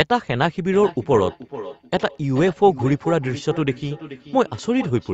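From 0.72 s to the end, there's feedback echo between two devices: the speech comes round again roughly every 0.4 s, peaking about 15 dB below the speech.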